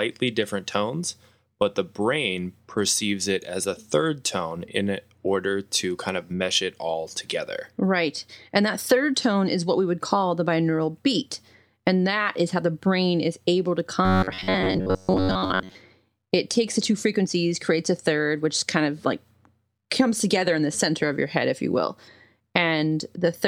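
Right after "brain is able to", from 14.05 to 15.76 s, there's robotic sound from repeated short buffers: the speech collapses into a stiff, metallic buzz near 94 Hz, likely from a roughly 11 ms chunk being looped through most of that stretch while fresh audio was missing.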